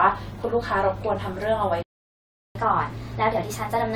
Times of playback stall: 1.82-2.55

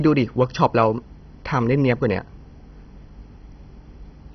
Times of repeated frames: none

